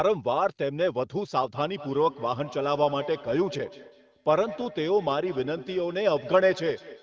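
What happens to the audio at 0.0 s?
At 0.0 s the speech is intact, with no dropout, click or distortion, only the narrowed top end from the call's microphone processing and the AMR wideband (HD Voice) codec.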